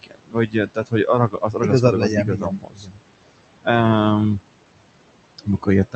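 Noise suppressor artifacts run through the whole clip. The suppressor works frame by frame, pulling down every band it judges to be steady noise by about 21 dB. The room noise, which sits about 15 dB under the speech, therefore dips in the gaps and swells back beneath each phrase. The speech rides over a call-codec band that tops out around 8 kHz.

Speech cut by the noise suppressor first appears from 0.02 to 1.09 s. Quieter parts of the speech were mistaken for noise and turned down with the background by as much as about 22 dB across roughly half a second, so that speech sounds swallowed. It recurs from 1.29 to 1.82 s (about 17 dB, a brief stretch), from 1.99 to 3.01 s (about 20 dB, over most of a second), and from 5.38 to 5.67 s (about 15 dB, very briefly), each time leaving the affected speech faint.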